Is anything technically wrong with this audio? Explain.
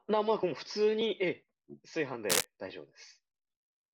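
Yes. From 2.30 to 2.45 s there is cable scratch noise, likely from a worn cable or connector shifting so its contact resistance fluctuated rapidly. This injects a dense, uneven burst of noise, somewhat louder than the speech, heard as a brief scratching rustle over it.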